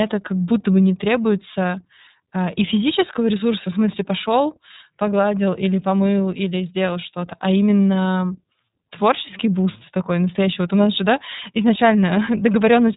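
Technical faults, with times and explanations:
Throughout, iLBC codec: the speech is band-limited with nothing above about 3.8 kHz, and has a plainly audible rough, slightly synthetic grain. Each 30 ms frame is coded on its own, which fits iLBC's 13.33 kbps mode.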